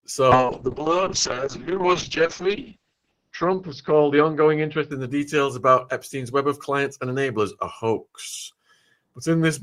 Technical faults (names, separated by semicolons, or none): call bitrate drop